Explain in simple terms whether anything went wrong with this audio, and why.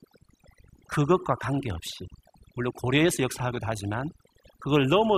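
Yes, something went wrong: the whole clip shows overdone noise removal. A noise reduction tool was applied too aggressively to this speech recording. It works by splitting the sound into many narrow frequency bands and turning down any band that resembles the background noise. Pushed too far, it also cuts away the quieter parts of the voice. The leftover background breaks into twinkling, warbling specks.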